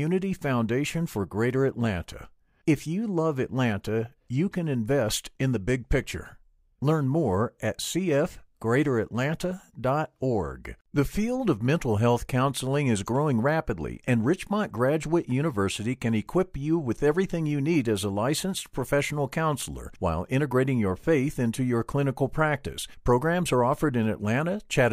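No technical faults can be heard anywhere in the speech.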